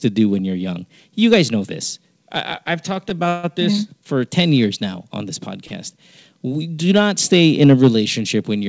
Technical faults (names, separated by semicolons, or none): hard clipping; short stall from a late packet; call audio freeze